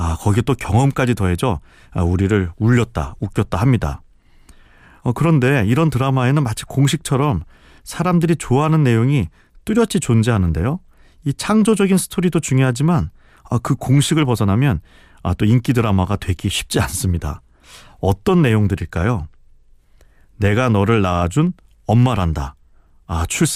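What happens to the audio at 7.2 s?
At 7.2 s the speech carries periodic USB or driver dropouts, running from 0.23 s to 23.47 s. Every 0.25 s a tiny sliver of audio is skipped, giving regular ticks and, on a spectrogram, evenly spaced thin vertical broadband lines.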